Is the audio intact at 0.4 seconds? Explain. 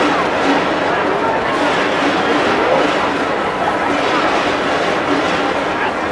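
Yes, the audio is intact at 0.4 seconds, with no dropout, click, distortion or other fault at that moment.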